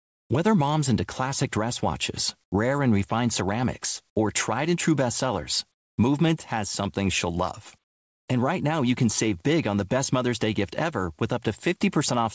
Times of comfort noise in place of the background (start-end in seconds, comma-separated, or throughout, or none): 0.00-0.30, 2.44-2.52, 5.74-5.98, 7.84-8.28